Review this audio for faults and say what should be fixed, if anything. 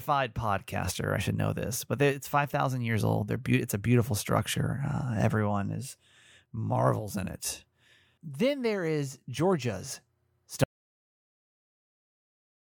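An audio dropout to silence begins at 10.64 s and runs to the end of the clip, about 2.1 s of nothing. The speech stops mid-flow and no room tone remains, so whatever followed is lost. This is likely a lost input, such as a disconnected device, a failed link or an accidental mute, while recording carried on writing silence. On a waveform the trace collapses to a flat line; a spectrogram shows a sharp vertical edge into silence. To prevent it, secure connections and monitor input levels live so that any loss is caught and re-recorded.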